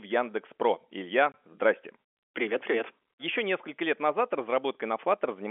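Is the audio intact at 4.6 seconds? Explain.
Yes, at 4.6 seconds the speech is intact, with nothing beyond the narrow 300 Hz to 3.4 kHz band of the G.711 telephone coding it passes through.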